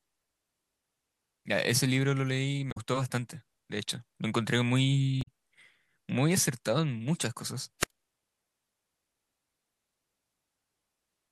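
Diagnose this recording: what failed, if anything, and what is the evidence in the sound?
Damaged data in a compressed stream, at 2.68 to 2.78 s, at the codec or storage stage. For about 0.1 s the speech breaks into a brief garbled burst: corrupted bytes made the decoder misread frames, lose sync and hunt for the next valid frame header.

Wireless microphone squelch dropout, at 7.80 to 7.90 s, in the analogue radio link before recording. Hiss briefly rises, then the output falls into a hole of near silence lasting about 68 ms as the FM signal fades and the receiver's squelch mutes it, before the speech returns.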